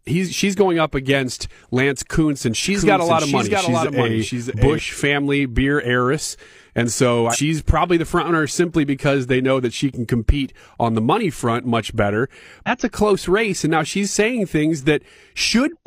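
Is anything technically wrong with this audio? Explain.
Yes, there are two kinds of fault in this speech. A doubled audio track runs from 2.63 to 4.79 s: a second copy, about 5 dB quieter and roughly 0.7 s late, likely comes from a slower capture path. It starts and stops abruptly. Damaged data in a compressed stream shows up at 7.29 to 7.37 s, 12.64 to 12.70 s and 15.70 to 15.76 s, where the decoder loses frame sync.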